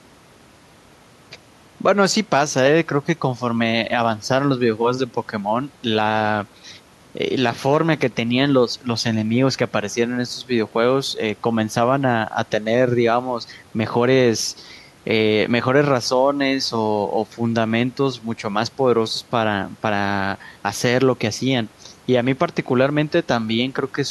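Speech recording with no technical faults; the only background is the room's own ambient noise, sitting about 32 dB below the speech.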